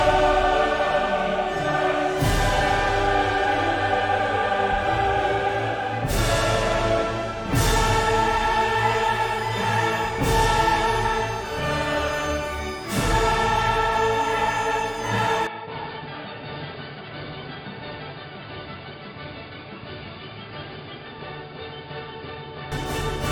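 At 15.47 s the sound abruptly turns duller and boxier, with no gap at the changeover, and stays that way until 22.72 s. The likely cause is an input switched to a poorer device partway through the recording. The level falls by roughly 10 dB and a faint new background noise appears far below the signal. On a spectrogram, energy above 4.9 kHz vanishes at the switch point. The waveform shows a visibly smaller envelope across that stretch.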